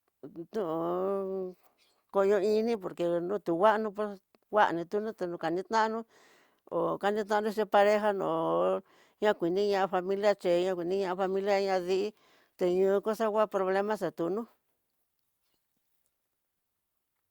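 Nothing goes wrong anywhere in this speech recording, so there's no fault to point to at any moment.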